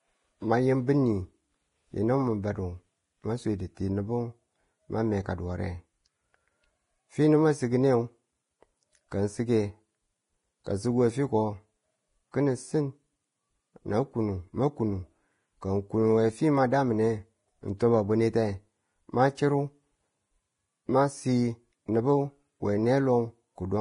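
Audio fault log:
throughout  Vorbis compression: the speech sounds hissy and grainy, with a rough, smeared treble and nothing above 10.6 kHz. This is likely heavy Vorbis coding at a low bitrate, around 29 kbps, where fine treble detail is quantised so coarsely it turns into noise.
10.64–10.66 s  pre-echo: a brief hiss of about 20 ms runs just ahead of a sharp attack, which sounds soft and smeared. The codec spreads its quantisation noise, sized for the loud onset, over the whole transform block, so it fills the quiet moment just before.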